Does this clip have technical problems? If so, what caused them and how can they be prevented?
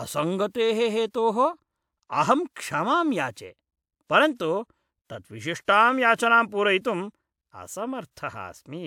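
No technical faults are audible.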